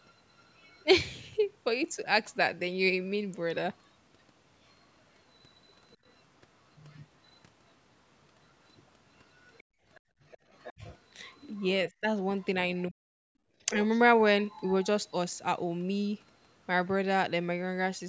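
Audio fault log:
0.01–0.85 s, 3.85–7.38 s, 9.34–12.83 s, 14.46–14.86 s: other side's voice leaking through. A second voice sits behind the talker, faint in the first two stretches and louder later, most likely loudspeaker playback the echo canceller failed to remove. Unlike double-talk suppression, it adds a voice instead of removing one.
9.63–10.22 s, 13.34–13.44 s: background gated by the echo canceller. The room tone itself drops out, by about 29 dB in the first dip and about 23 dB in the second, while playback is active, then returns. The talker's voice is not what is cut here.
10.78–13.78 s: speech suppressed in double talk. With both sides speaking, the talker's own voice is chopped and dips very deeply in pieces, about half a second in all, likely because the canceller mistook it for echo. Here the foreground voice is cut, not just the background.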